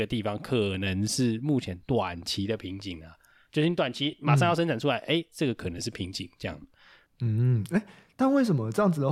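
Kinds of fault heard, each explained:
Lost LE Audio frames: Bluetooth LE Audio frames dropped out and the LC3 decoder patched each gap with the previous spectrum under randomised signs, so the speech smears into a brief noisy blip at 1.66 s (7.5 ms, one frame's worth) and at 4.11 and 5.78 s (15 ms each).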